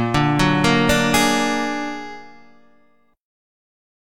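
No technical faults can be heard anywhere in this audio. Nothing in the sound calls for a timestamp or a fix.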